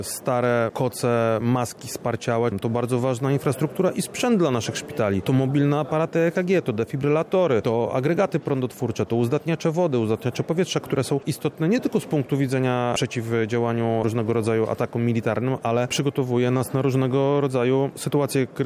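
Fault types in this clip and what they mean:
No fault types turn up here at all, nothing in the recording stands out as a technical problem worth listing.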